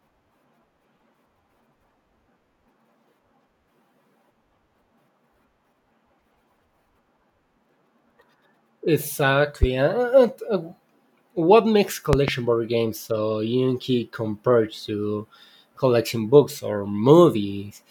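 Loud pops strike the speech at 9.63–9.66 s and, as a quick double, at 12.13–12.31 s, sharp thumps far above the speech, likely from voltage spikes such as a plug or switch.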